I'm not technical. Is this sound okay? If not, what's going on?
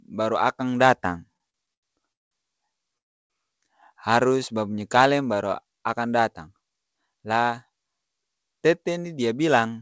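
No, it has three problems.

From 1.34 to 2.33 s there are repeated stalls (stutter). The sound hangs seven times, the longest for about 0.19 s. Data was arriving late, so the receiver stretched out the last sound each time. Nothing is lost, but it drags and stutters.

From 2.98 to 3.32 s there is a call audio freeze. The sound stops for about a third of a second, almost all of it silent. Then it picks up exactly where it left off. The likely cause is data held up on the way, leaving the receiver nothing to play.

From 6.34 to 7.70 s, right after "babunyi kaleng baru akang", there is a jitter buffer speed-up. The audio plays about 10% faster, at the same pitch. The receiver was catching up on a backlog by trimming tiny slices, roughly 0.15 s in all. It sounds hurried.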